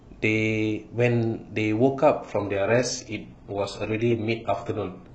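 At 2.23 s the adaptive stream switches to a lower bitrate, likely because the connection slowed, and stays there to the end. The speech abruptly picks up more codec artefacts, with no gap, which fits a drop from full AAC to very low-rate HE-AAC.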